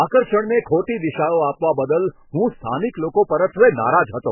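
Heavy MP3 compression runs through the whole of this speech clip. Nothing survives above 3 kHz, giving a dull, boxed-in sound, and weak frequency lines switch on and off from frame to frame, leaving a watery, swirling texture and smeared consonant onsets. The damage is severe enough that it likely comes from a very low bitrate, around 8 kbps. A spectrogram would show a hard ceiling at 3 kHz and patchy, blocky gaps below it.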